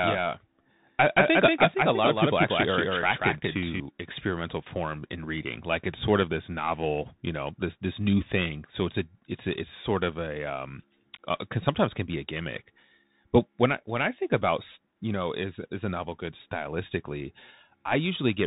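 Speech recorded through a Bluetooth CVSD headset codec: nothing above 3.8 kHz survives, sibilants turn scratchy, and granular hiss sits underneath, consistent with 64 kbps one-bit delta coding. From the start until 3.8 s a doubled audio track plays, with an equally loud copy trailing about a fifth of a second behind, likely from a second, slower capture path.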